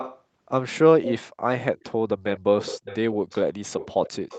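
From 0 to 0.22 s, faintly at 1.78 to 1.84 s, and from 2.26 s on, a copy trails about half a second behind: echo leak, likely from a loudspeaker's leaky echo canceller.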